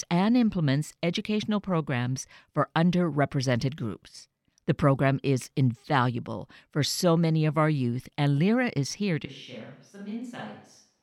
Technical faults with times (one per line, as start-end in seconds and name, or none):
9.26-11.03 switch to a distant microphone